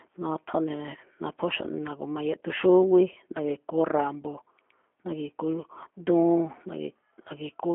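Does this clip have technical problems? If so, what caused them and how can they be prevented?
Yes. Throughout the speech the sound is thin, slightly rough and synthetic, with no content above about 3.5 kHz and a narrow telephone band of roughly 250 Hz to 3.4 kHz. This is G.729 codec damage, here the G.729A variant. It rebuilds each 10 ms frame from a vocal tract filter, a pitch predictor and a few pulses instead of the actual waveform, which fits an 8 kbit/s VoIP call. To prevent it, record locally or use a wideband codec such as Opus.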